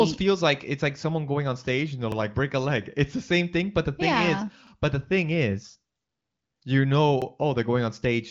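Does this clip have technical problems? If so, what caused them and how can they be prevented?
Yes. Overlapping chunks cause a short stutter at 2.12 to 2.17 s (after "on stage and they're", before "break a leg"), at 4.67 to 4.72 s (after "the thing yeah is", before "but the thing is"), and at 7.22 to 7.27 s. The audio was handled in blocks about 2.5 s long, and each new block began roughly 48 ms before the previous one finished, so that slice plays twice at every join. This produces a small click-like repeat at a steady 2.5 s spacing. To prevent it, make each block start exactly where the last ended, or crossfade and trim the overlap when reassembling.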